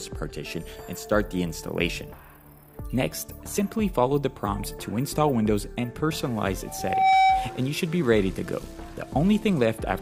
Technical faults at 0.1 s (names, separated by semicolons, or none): none